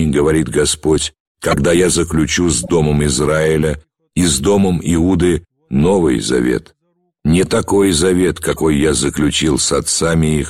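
Damaged compressed frames reached the decoder and were played anyway, producing four corrupt frame decoded events. At 1.51 to 1.57 s, a couple of frames decode with misread gains, sending energy to wrong frequencies as a harsh blip near full scale. Quieter squeaks follow at 2.63 to 2.70 s, around -20 dBFS, and 6.28 to 6.31 s, around -10 dBFS. The longest, 8.51 to 8.60 s, spans a few frames as a short noisy burst.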